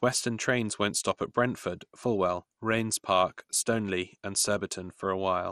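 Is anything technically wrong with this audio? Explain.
Yes, the speech carries MP2 compression damage throughout, likely from a low-rate encode that fits about 64 kbps. Upper sub-bands switch on and off, leaving a dull, gurgling, granular sound; a spectrogram shows nothing above 13.6 kHz and flickering blocky upper bands.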